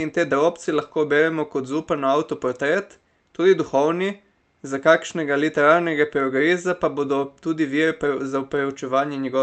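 A speech clip with short concealed packet loss at 1.17 to 1.21 s: about 20 ms of audio never arrived, and the receiver extrapolated the preceding sound to cover the gap, leaving a brief smear. The call-codec path caps the audio at 8 kHz, consistent with Opus at around 32 kbps.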